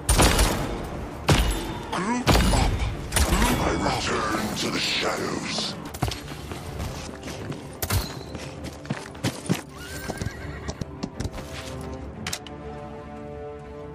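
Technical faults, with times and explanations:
3.32 s and 10.82 s: audio missing between chunks. At each point the sound jumps forward abruptly, with about a third of a second gone and the two sides butted together with no gap. This is likely a recorder working in blocks of roughly 4 s and dropping a piece at each handover. On a waveform, each join shows a sudden discontinuity; on a spectrogram, a thin vertical seam where the patterns on either side fail to connect.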